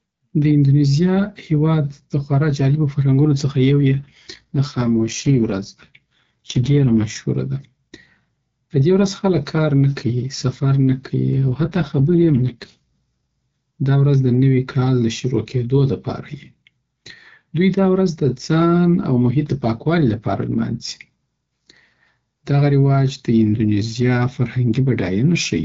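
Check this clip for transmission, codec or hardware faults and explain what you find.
Two stretches of AMR rate drop, from 3.89 to 7.16 s and from 11.34 to 12.78 s: the speech turns rough and synthetic without losing bandwidth or breaking up, then clears as the AMR-WB link returns to its cleaner wideband sound. This fits the network forcing the codec down from about 12.65 to 6.6 kbit/s to protect a weak radio link.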